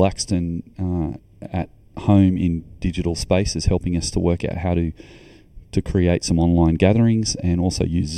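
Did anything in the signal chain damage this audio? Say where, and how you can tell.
Yes, channel delay (comb filtering) runs throughout: a hollow, phasey speech tone with fixed notches from around 1.5 kHz, where one channel arrived roughly 0.4 ms late before the mono sum.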